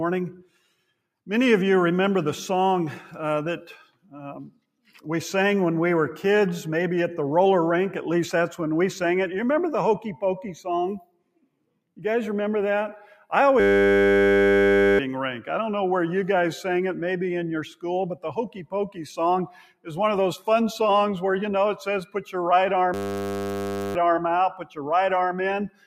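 A noise suppressor applied to music or sounds stays active across the whole clip. It treats sustained material as noise, so the level swings by about 5 dB as held tones and tails are pulled down while onsets pass. On a waveform the envelope looks as if it is breathing.

Sound cut by the noise suppressor appears at 0.4–0.89, 3.82–4.14, 4.47–5.0 and 10.99–11.78 s. Each time a steady passage sinks by up to about 19 dB, leaving dark gaps in the spectrogram where sustained energy should continue.

A system hang loop runs from 13.6 to 14.99 s. The output freezes and repeats a single 10 ms buffer, giving a steady 100 Hz buzz. The spectrogram shows evenly spaced harmonic lines, and the waveform shows one identical cycle tiled end to end.

The suppressor cuts again at 19.48–19.88 s.

A second hang loop at 22.94–23.95 s produces the same 100 Hz buzz.

Further suppressor dips follow at 24.61–24.77 s, about 12 dB deep, and from 25.69 s to the end.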